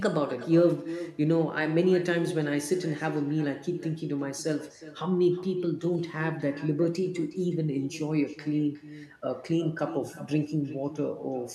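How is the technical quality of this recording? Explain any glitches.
The recording is compromised by one fault that runs from start to finish: echo with no canceller. Throughout the speech, every phrase returns roughly 0.4 s later as a fainter, thinner copy, about 14 dB below the original. It sounds as if the far end played the call over a loudspeaker and its microphone fed it straight back, with nothing cancelling it before the return trip through the network. On a waveform, each burst of speech is trailed by a smaller replica. On a spectrogram, every syllable's pattern reappears shifted right by that delay, weaker, filling gaps that should be silent.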